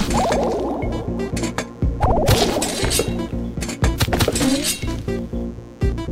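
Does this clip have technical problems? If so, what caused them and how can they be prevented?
Yes. A steady, raspy mains buzz sits under the sound for the whole clip, roughly 30 dB below it: quiet, but gritty rather than a smooth hum. It comes from sharp switching spikes leaking into the signal path from something like a light dimmer, a rectifier in a power supply, or an unshielded cable. These spikes arrive twice per cycle of a 60 Hz supply, so the buzz is built from 60 Hz harmonics stretching up into the kilohertz range. To prevent it, keep audio cables and equipment away from dimmers and cheap power supplies, and use properly shielded, balanced connections.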